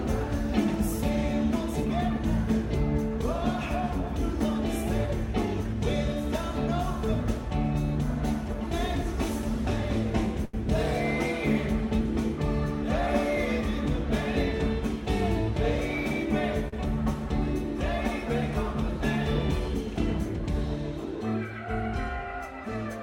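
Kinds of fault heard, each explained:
Short stall from a late packet: the jitter buffer ran dry, so the last sound was held and stretched, for 84 ms at 10.45 s and 42 ms at 16.68 s. Playback then resumes where it stopped, with nothing skipped, unlike a lost packet, where audio vanishes.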